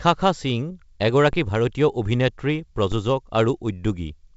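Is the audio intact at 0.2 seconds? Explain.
Yes, the speech at 0.2 s is intact, carried through G.722 wideband telephone coding at 64 kbit/s with no fault present at that moment.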